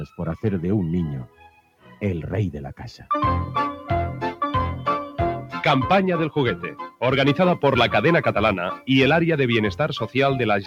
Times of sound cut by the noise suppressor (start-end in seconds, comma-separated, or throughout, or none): 1.26-2.02